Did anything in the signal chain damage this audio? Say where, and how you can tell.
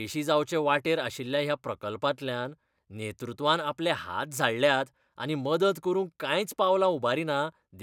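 No, nothing in the signal chain damaged this audio, and there is nothing to point to anywhere along it.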